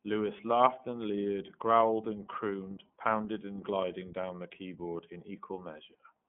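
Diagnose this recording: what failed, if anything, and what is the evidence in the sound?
The failure is at the codec stage: the speech has been through iLBC, and the damage is plainly audible from start to finish. Nothing gets above 3.8 kHz, and the usable band sits at roughly 150 Hz to 3.4 kHz, so it has that thin phone-line sound. Each frame's excitation is coded on its own, which fits 30 ms frames at the 13.33 kbps mode. That independent coding gives the speech its slightly rough, synthetic grain.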